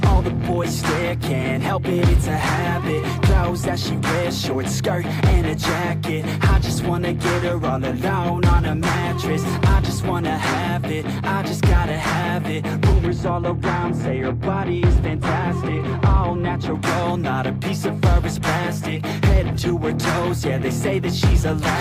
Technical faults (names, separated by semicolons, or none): de-emphasis applied wrongly